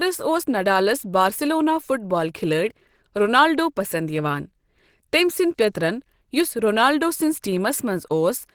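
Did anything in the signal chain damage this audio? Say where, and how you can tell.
Yes, at the codec stage, and it runs through the whole speech clip. The voice has a hoarse, grainy, muffled texture, yet the spectrum stays full and extends to about 20.3 kHz with few spectral holes. That points away from MP3, whose holes produce swirling artefacts, and toward the likely cause, Opus compression in its hybrid speech mode. The encoder fills thin bands with noise, roughening the voice, which fits a low rate around 16 kbps.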